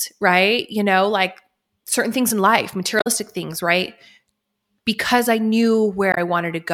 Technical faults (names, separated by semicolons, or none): damaged data in a compressed stream